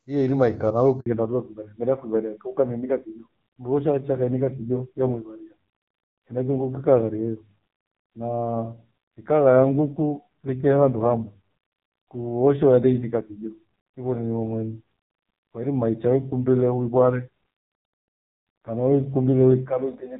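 At 1.00 s the call is passed from one network to another, and for about 60 ms no speech frames arrive. This handover gap makes the speech fade out within a few tens of milliseconds and leaves a hole until the new link picks up at 1.06 s.

From 1.06 s to the end, the connection falls back to narrowband. The clear, full speech heard before the switch, consistent with HD Voice at around 23.85 kbit/s, gives way to audio that stops at 4 kHz. It sounds duller, boxier and rougher, which fits a low narrowband rate near 5.9 kbit/s.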